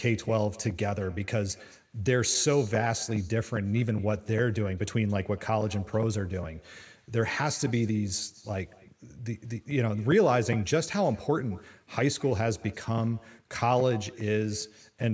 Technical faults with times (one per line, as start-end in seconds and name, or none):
0.00-15.14 echo with no canceller